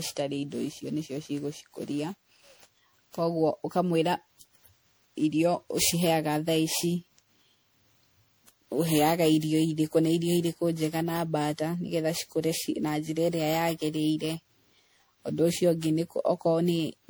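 From start to finish, the speech carries generation loss, likely from being decoded and re-encoded through a lossy MP3-style codec around fifteen times, at a quality that fits roughly 96 kbit/s. Each pass quantised the signal again on a shifted frame grid, so noise and missing spectral bands piled up. The result is a swirly, hollow, smeared tone, duller than a single encode at that rate, with consonant onsets blurred rather than crisp.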